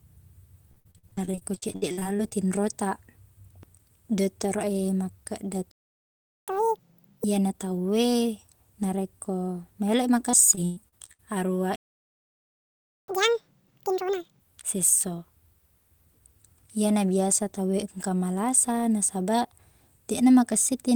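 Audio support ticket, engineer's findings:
Repeated packet loss (robotic sound), 0.71–2.33 s and 10.31–11.21 s: network jitter buffer missing packets, gaps patched by extending prior audio. 19 gaps first span, 6 second (longest 114 ms, just after "tau e narekko maeloi"). Choppy speech, roughly a third concealed.

Playback stall, 5.71–6.48 s (0.76 s) and 11.76–13.08 s (1.32 s): output likely starved of data or render thread blocked. Speech cuts out mid-flow into silence, then resumes.

Catch-up at higher speed, 6.48–7.24 s and 13.08–14.41 s: player drains backlog by resampling at 2.0x after each stall. Speech runs double speed, pitch up about ten semitones, before "iyana tau e narekko" in the first case, then normal.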